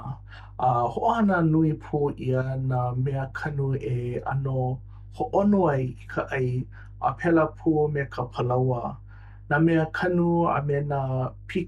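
A speech recording with mains hum running under it from start to finish. There's a steady low tone sitting at 50 Hz, with a few low harmonics stacked on top, and it's fairly prominent, roughly 20 dB down from the speech. That's the classic sign of power-line frequency leaking into the signal path, most often through a ground loop between connected gear or from a transformer sitting close to a cable or input.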